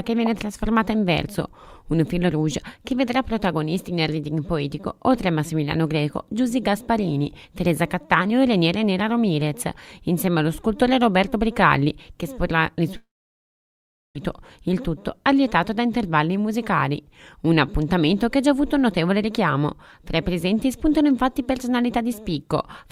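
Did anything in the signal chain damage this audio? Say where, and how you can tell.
Yes. From 12.96 s to 14.16 s the sound breaks off: the last moment is stretched into a short buzzy tail that fades within about a tenth of a second, leaving roughly 1.1 s of near-silence before the audio resumes further along, with about 1.2 s of material gone. That pattern points to the network stage, likely a long network dropout, where the receiver's concealment smeared the final sound and then gave up and filled the gap with silence.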